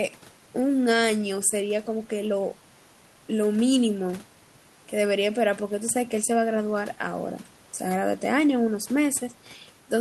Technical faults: none

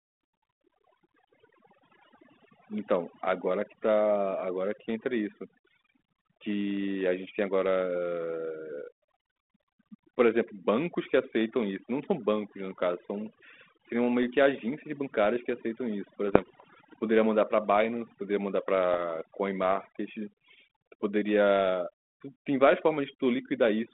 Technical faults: overdone noise removal; bit errors on an ADPCM link

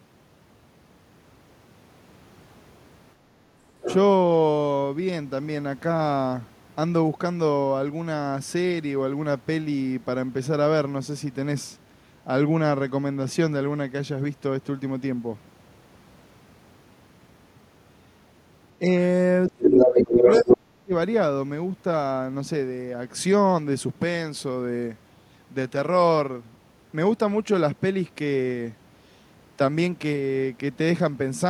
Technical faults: other side's voice leaking through; speech suppressed in double talk

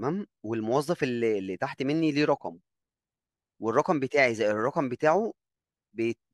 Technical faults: none

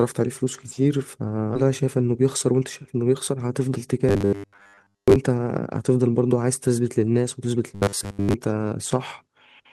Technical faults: skip ahead; jitter buffer speed-up; robotic sound from repeated short buffers

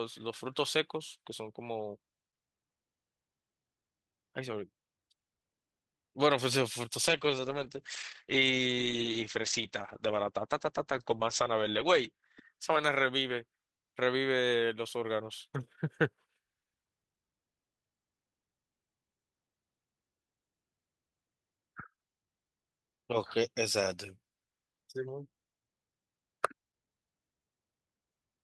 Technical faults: call bitrate drop

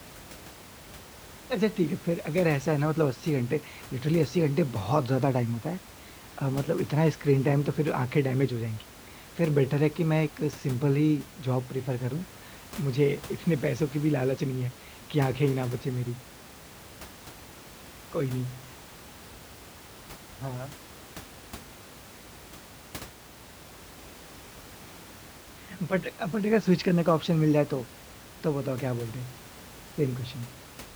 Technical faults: none

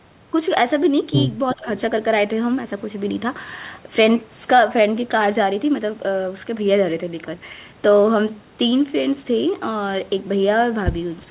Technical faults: echo leak; speech suppressed in double talk

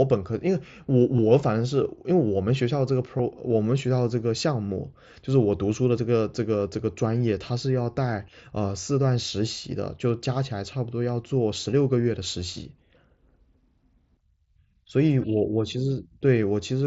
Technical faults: concealed Bluetooth headset packet loss

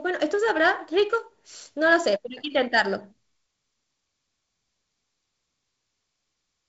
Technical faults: none

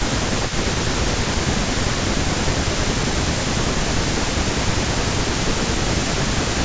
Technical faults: echo leak; speech suppressed in double talk

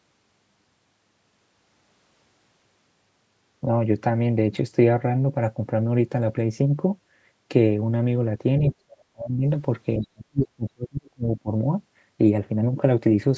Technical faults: speech suppressed in double talk

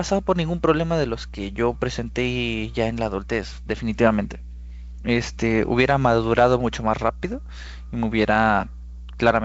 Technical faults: mains hum

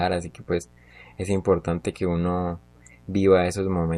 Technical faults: mains buzz

